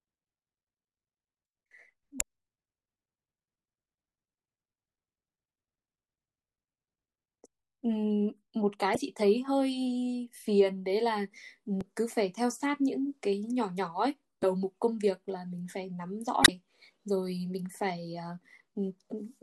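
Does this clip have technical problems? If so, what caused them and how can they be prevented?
Yes. Damaged data in a compressed stream produces brief glitches at 2.17–2.22, 8.93–8.97, 11.78–11.83, 14.40–14.44 and 16.42–16.49 s. Corrupted bytes make the decoder misread frames and resynchronise. Verifying file integrity with checksums and using error-checked transfer prevents it.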